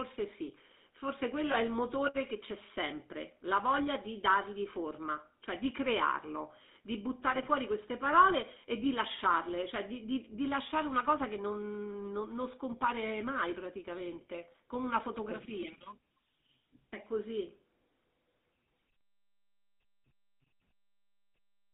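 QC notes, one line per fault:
Throughout: GSM full-rate codec. The speech has a plainly audible buzzy, gravelly roughness, because the codec models the vocal tract and drives it with a coarse pulse excitation that keeps only every third sample, at a bitrate consistent with 13 kbps. The band is confined to roughly 200 Hz to 3.7 kHz, so the sound is thin, with no low body and nothing in the upper range.
0.29 to 21.0 s: clock slip clicks. Faint ticks recur about every 0.7 s, around thirty in all, and are most noticeable on louder sustained sounds and absent in pauses. Each is a single-sample jump where two free-running clocks drift apart by a whole sample. The steady spacing fits a clock mismatch of roughly 30 ppm, which is the likely cause.
1.52 s: lost GSM frames. One frame, about 20 ms, is replaced by repeating the previous frame's settings, giving a brief rough, metallic ring in place of the missing sound. 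Because the gap is a single frame, the ring is short and normal decoding resumes before any fade toward silence.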